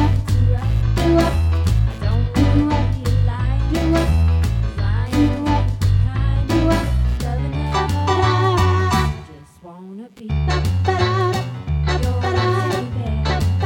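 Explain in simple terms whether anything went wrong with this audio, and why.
A faint buzzing chirp runs underneath the whole recording, pulsing roughly 150 times a second and rising and falling on its own schedule. This is computer activity noise: the computer's changing workload disturbs the shared electrical ground feeding the audio circuit.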